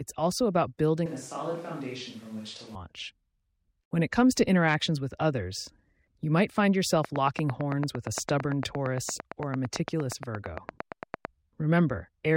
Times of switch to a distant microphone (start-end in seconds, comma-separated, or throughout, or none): 1.06-2.75